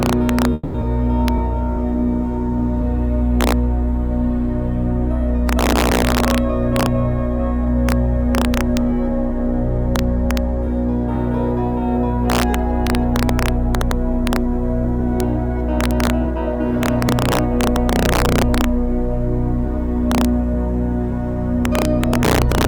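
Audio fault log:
Throughout: integer overflow. Loud peaks driven about 3 dB past the integer limit wrap to the opposite sign instead of being held. Each one flips across the full range. A small fraction of samples are affected, so sharp violent cracks land on the loudest moments, harsher than clipping.
0.53 to 0.76 s: call audio freeze. The last sound is stretched into a fading buzz or hiss for about 210 ms. This is likely a jitter buffer running empty while packets were held up. The audio then resumes where it stopped. Nothing is lost, but a gap of about 210 ms is inserted.
7.39 to 11.15 s: jitter buffer speed-up. The receiver trims short pitch-period pieces again and again to shed excess buffered delay. Roughly 70 ms goes in total. The sound runs about 2 percent fast at unchanged pitch.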